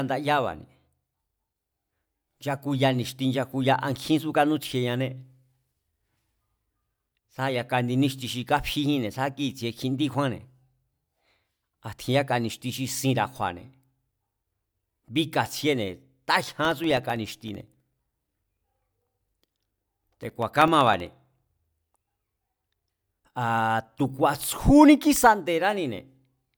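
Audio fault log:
16.65 to 21.64 s, periodic USB or driver dropouts: a run of evenly spaced ticks every 0.064 s, about 70 of them, each a gap of roughly a millisecond where the speech briefly drops to silence. Something is stalling the USB bus or audio driver on a fixed schedule, so a sliver of audio never arrives and is replaced by silence. The abrupt cut and resumption of the waveform produces a click, heard only while speech is present, giving a steady buzzing tick pattern.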